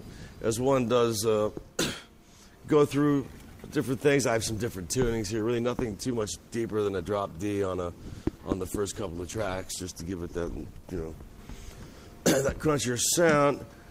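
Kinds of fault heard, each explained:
Adaptive stream at a lower bitrate: the connection slowed, so the player switched to a leaner encoding of the same stream, from about 5.38 to 11.38 s. The drop in quality points to a move from roughly 64 to 16 kbit/s Opus. Codec artefacts rise suddenly for those six seconds, then clear. A spectrogram shows an abrupt change in the upper bands at both switch points. The waveform stays continuous, with no gap.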